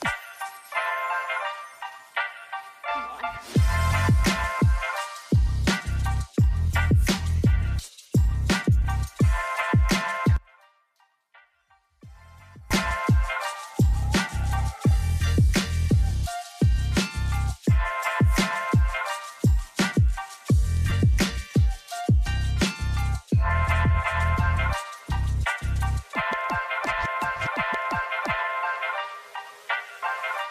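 Two brief dropouts hit this audio, each a lost LE Audio frame: one at 4.59 s and one at 20.90 s. Each gap is only about 10 ms, which fits a single missing frame, so the decoder's repeated spectrum with scrambled signs shows up as a short noisy smear, not silence. From 10.36 to 12.71 s the level falls by about 26 dB, leaving only a faint copy of the sound. That's the likely sign of one channel inverted and then folded to mono, so everything common to both sides cancels and only their difference survives.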